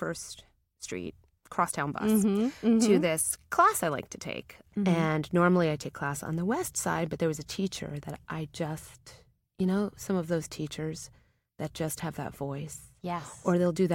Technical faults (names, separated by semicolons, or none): none